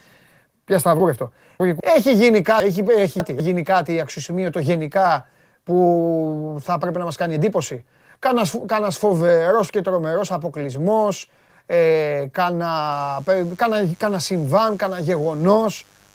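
Between 1.0 and 1.8 s, and again from 2.6 to 3.4 s just before "γίνει κάτι αξιοσημείωτο γενικά", the speech stumbles with chunks out of order. A 200 ms block plays three chunks late, so each passage sounds jumbled, with three hard joins. A spectrogram shows thin vertical broadband lines at each join, with pitch harmonics breaking and jumping.

From 12.92 s to the end, mains buzz enters: a steady, raspy 50 Hz hum roughly 35 dB below the speech. Sharp switching spikes repeat 100 times a second, visible as a dense ladder of horizontal harmonic lines reaching several kHz and as regular spikes in the waveform.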